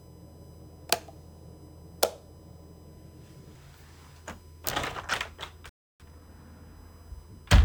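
A recording of everyday sounds carries USB whine throughout: a steady 1 kHz tone sitting about 35 dB below the sound, from the bus's 1 ms frame activity leaking through power or ground. On a spectrogram it shows as a thin, unbroken horizontal line at 1 kHz across the clip. At 5.69 s a playback stall cuts the audio to silence for about 0.30 s, until 6.00 s, most likely because the player ran short of data or its thread was blocked. The waveform drops to a flat line there and the spectrogram shows an empty vertical gap. From 6.00 to 6.30 s comes time-compressed catch-up, where the player clears its backlog by dropping and cross-fading short slices. The sound runs at twice normal speed with unchanged pitch, and the spectrogram shows events packed more tightly in time without shifting in frequency.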